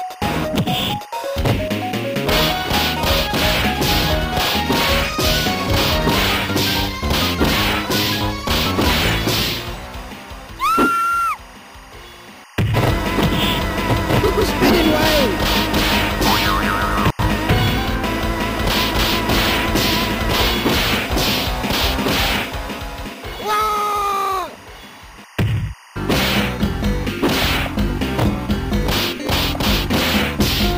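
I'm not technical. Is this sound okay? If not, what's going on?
No. A faint, steady chirping warble runs behind the sound from start to finish. This is timecode bleed. Film and video gear sends a timing signal as a rapid buzz that flips between two pitches, near 1 kHz and 2 kHz. Here it leaked from a nearby cable or track into the audio. Its rhythm fits timecode running at 24 frames per second. It sits well below the main sound, but stays audible the whole time.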